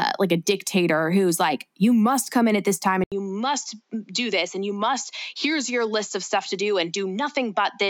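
At 3.04 s, after "in at this time", an 80 ms gap, then duller, quieter speech cut above 7.6 kHz: input likely switched to a poorer device.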